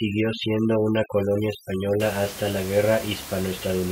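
From 0.0 to 2.0 s the speech shows overdone noise removal. A noise reduction stage set far too aggressively pulls individual frequency bands down to almost nothing whenever their level sits close to its noise estimate, and the quieter parts of the voice fall under that threshold too. The background collapses to near silence dotted with twinkling, metallic specks. After 2.0 s the room noise returns at about 14 dB below the speech.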